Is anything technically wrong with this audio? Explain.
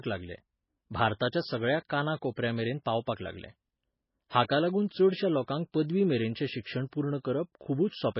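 Yes, there's heavy damage running through the whole clip, and it sounds like MP3 compression, likely at a very low bitrate, something like 16 kbps. There's nothing above 5.5 kHz, because a starved encoder drops the treble outright. It also zeroes out weaker frequency lines that flicker on and off frame to frame, so the speech comes across watery and swirly, with metallic chirps on the s sounds and smeared consonant attacks.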